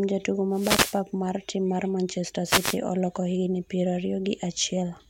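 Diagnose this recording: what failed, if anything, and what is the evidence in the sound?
The radio link on the wireless mic failed twice: two wireless microphone noise hits, from 0.51 to 1.02 s and from 2.45 to 2.78 s. Each one is a swish of static rising over the speech and then clearing. That's the analogue FM signal fading as reflected paths cancel at the receiver antenna. As the carrier drops, receiver hiss climbs. The problem sits in the radio link, ahead of the wired analogue chain.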